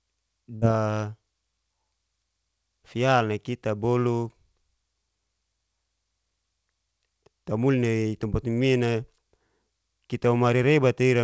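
At 0.56 to 0.63 s, a burst of packet loss interrupts the speech. Consecutive packets were lost or arrived too late, so the receiver extended the last sound for 54 ms as a fading hold, then resumed with 60 ms of speech missing, heard as a brief fading fill before the speech jumps ahead.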